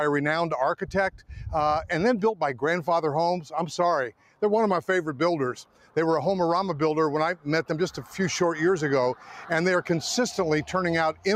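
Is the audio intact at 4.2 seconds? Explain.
No. From 4.12 to 4.42 s there is a sound cut by the noise suppressor. It mistook this sound for noise and pulled it down by about 12 dB at its deepest. The noise suppressor, applied to music or sounds, stays on throughout. It treats steady parts as noise, so the level pumps by a few decibels and tails thin out.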